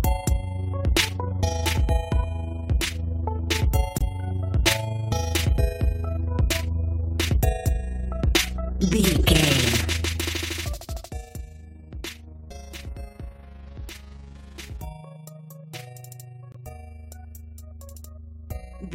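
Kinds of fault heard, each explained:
Overlap-add ripple: frames rejoin with uneven overlap gain, so level wobbles about 6 dB at roughly 30 Hz, a rough fast flutter throughout.
Corrupt frame muted: damaged frames got dropped and replaced by silence, giving abrupt two-frame holes near 3.98 s and 16.52 s, each about 40 ms.
Zipper noise: the fade from 9.8 to 11.36 s moves in 1 dB steps, about ten per second, each step ticking audibly as level falls roughly 15 dB.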